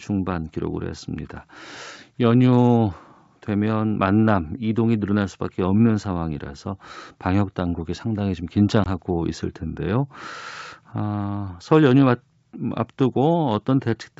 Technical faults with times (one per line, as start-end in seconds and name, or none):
8.84-8.87 packet loss on an ADPCM call